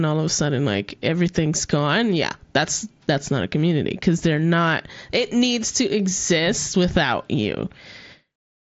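No technical faults can be heard in the speech. It comes over a Bluetooth mSBC headset link, so the sound stops at about 7.7 kHz and carries the light grain that codec leaves on it.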